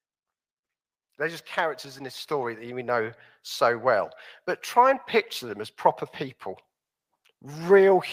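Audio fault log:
1.02–4.17 s, automatic gain rising: the level climbs steadily by about 8 dB over roughly three seconds as the gain control, judging the input too quiet, turns itself up. The speech and the background noise swell together, which separates this from a performer moving closer to the microphone, where the voice would grow but the room would not. The slow, one-way climb also differs from compressor pumping, which dips and recovers with each loud syllable.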